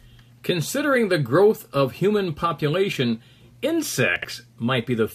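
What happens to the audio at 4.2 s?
Between 4.16 and 4.25 s, chunks play out of order: a roughly 21 ms piece arrives three chunks late, leaving a jumbled moment, yet unlike a dropout nothing goes missing.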